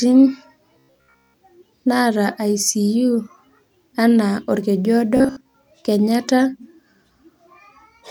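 From 0.74 to 1.36 s, the speech turns into a robotic sound from repeated short buffers. It becomes a rigid, metallic buzz at 66.8 Hz that still follows the words roughly. The likely cause is new audio arriving too seldom, so a segment of about 15 ms is replayed while most of the real audio is skipped. The same buzz returns at the same pitch from 5.17 to 5.54 s.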